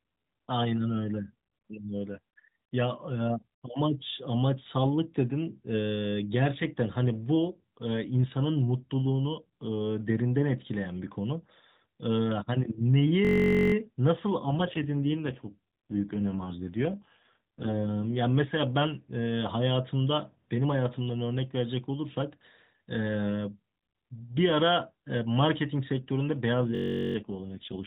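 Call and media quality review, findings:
System hang loop, 13.25–13.74 s and 26.75–27.16 s: a 21.33 ms slice repeats about 23 and 19 times, giving a steady 46.9 Hz buzz. This points to a driver stall over a 1024-sample ring buffer, with no audio lost. On a spectrogram it shows as harmonic comb lines every 46.9 Hz; the waveform shows an identical repeating block.

AMR rate drop, 14.43–18.20 s and 26.53–27.87 s: the speech turns rougher and more synthetic as the codec falls from 12.2 to 4.75 kbps. The 4 kHz AMR-NB band stays intact and there is no gap. On a spectrogram, formant detail smears and upper-band texture turns grainy, with no change in band edges.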